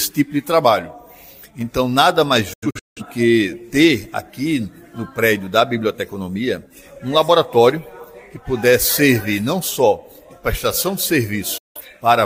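The receiver lost its digital signal twice and muted until good frames returned, a digital broadcast dropout. From 2.53 to 3.02 s the sound fades out in about 8 ms and breaks into several short holes totalling roughly 300 ms, the longest 171 ms, a pattern that fits around seven failed frames. At 11.58 to 11.81 s about 171 ms of sound cuts out after the same 8 ms fade, and nothing sent during either gap comes back.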